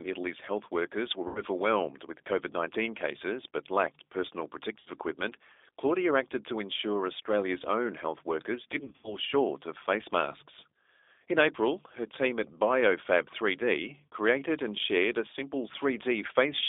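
From the start, the speech runs through a G.729 codec at 8 kbit/s, confined to roughly 300 Hz–3.6 kHz. Its pulse-based excitation makes the voice plainly rough and synthetic, a steady texture distinct from the hollow, swirling artefacts of a transform codec.

VoIP packet loss concealed by the speech codec breaks in at 1.28–1.41 s after "health workers were", and again at 4.80–4.89 s after "cases but lacked personal". The decoder stretches its last pitch and filter into a fading buzzy tone or coloured noise, about 70 ms and 60 ms of missing audio, which fits several lost 10 ms frames. Around 8.80–9.16 s, between "own health workers" and "short of face masks", about 130 ms of losses are scattered over roughly 240 ms, leaving the voice weak or distorted across the span. A shorter concealed gap falls at 14.12–14.14 s. Unlike a hard dropout, the sound smears, decays and recovers slowly.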